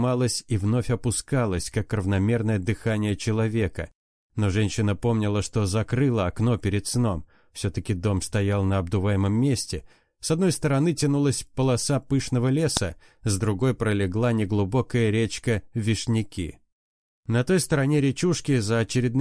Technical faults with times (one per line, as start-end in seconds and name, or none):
12.77 file header played as audio